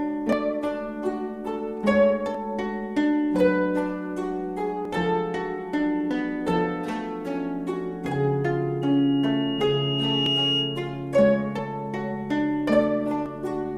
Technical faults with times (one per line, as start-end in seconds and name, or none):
0.33 dropped buffer (overrun)
2.35 dropped buffer (overrun)
4.85 dropped buffer (overrun)
6.11 dropped buffer (overrun)
8.81-11.07 loudspeaker feedback squeal
10.26 dropped buffer (overrun)
11.59 dropped buffer (overrun)
13.26 dropped buffer (overrun)